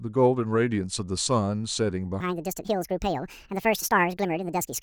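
At 2.20 s the speech abruptly becomes a section at the wrong speed, running about 1.78 times too fast through to the end at 4.83 s. Pitch rises by around ten semitones along with the tempo, so the talker sounds chipmunk-like and hurried, likely from playback against the wrong clock. On a spectrogram the harmonics and formants jump upward with wider spacing and syllables shrink in width; the waveform shows tighter cycles and shortened syllable envelopes.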